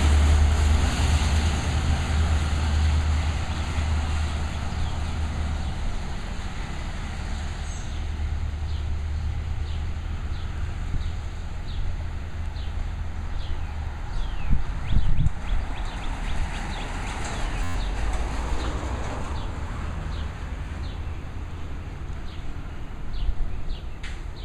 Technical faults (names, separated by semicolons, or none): system hang loop